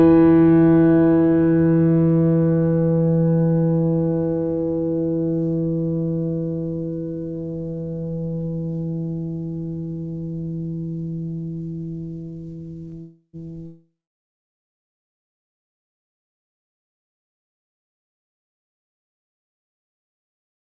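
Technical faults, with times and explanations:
12.89–12.95 s, short concealed packet loss: About 30 ms of the music failed to reach the decoder in time, and the receiver covered the gap by extending the last stretch of sound from its pitch or as shaped noise before blending back into the real signal. It comes across as a brief smear or wobble in the music. The G.722 call path limits everything to below 8 kHz, so the patch is dull-toned too.
13.01–13.36 s, long network dropout: Roughly a third of a second of audio never arrived, most likely because the network stopped delivering it. For about 320 ms the receiver keeps extending the last sound, which turns into a fading buzz or hiss. That leaves around 50 ms of silence before the music returns further along, with about 330 ms of the original passage missing rather than delayed.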